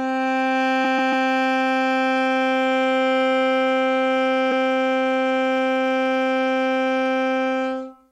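At 0.84 to 1.26 s the music stutters from repeated frames: a 139 ms block plays three extra times. It repeats once more at 4.51 s with a 93 ms block.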